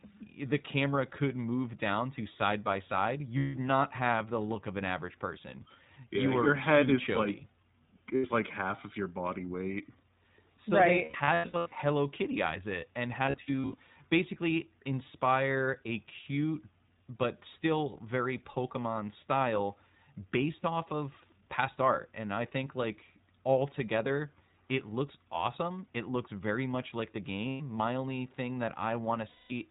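A narrow, slightly rough and synthetic quality runs through the whole speech clip, with nothing above 4 kHz. That points to the iLBC codec, probably its 15.2 kbps mode with 20 ms frames. iLBC is a narrowband codec, so the band stops at telephone width and a plainly audible rough, synthetic coarseness stays on the voice.

Lost iLBC frames then break in six times. Each sounds like a held, faintly buzzy vowel standing in for the real sound. The decoder repeats the last pitch cycle mixed with noise while packets are missing. The first comes at 3.38 to 3.56 s, about 160 ms, which fits eight lost frames. The second comes at 8.16 to 8.26 s, 80 ms, just before "like half of your". From 11.04 to 11.76 s, 480 ms of losses are scattered in runs of up to about 100 ms. From 13.26 to 13.80 s, after "eyes it and" and before "basically inspire a cute", 300 ms is lost in short runs. Further gaps follow at 27.48 to 27.62 s, after "very much like the", and at 29.28 to 29.52 s, 220 ms. 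Since each frame stands alone, the voice recovers almost at once after every gap.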